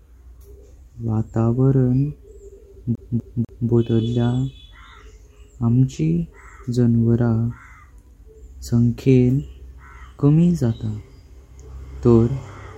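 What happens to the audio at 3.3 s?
At 3.3 s the speech is caught in a CD stuck on one turn, from 2.95 to 3.70 s. A scratch keeps knocking the laser back one track. The same 0.25 s snippet plays three times, with a brief mute at each jump, giving a fast, even stutter.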